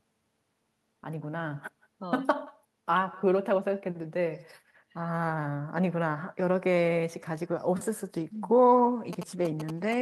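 From start to finish, every phrase is trailed by a faint, thin copy of itself arriving about a fifth of a second later and sitting around 26 dB below the speech. This is echo with no canceller. At the far end the call is playing through a loudspeaker, that end's microphone picks it up, and nothing subtracts it, so the talker's own voice returns after the network round trip as a shadow.

From 9.13 s to the end at 10.02 s, a galloping dit-dit-dit of short buzzes breaks in, fairly loud and not far below the speech itself. These are GSM signalling bursts. A 2G phone nearby is exchanging brief radio bursts with the network, and the audio circuitry rectifies that energy into sound. The buzz pitch matches the 217 Hz burst rate, which gives the interference its characteristic rasp.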